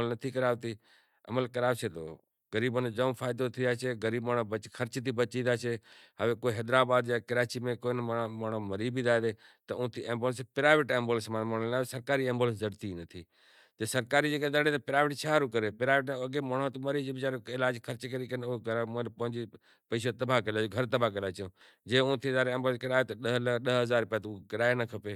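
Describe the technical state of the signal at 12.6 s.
At 12.6 s the speech signal is intact, with no fault present at that moment.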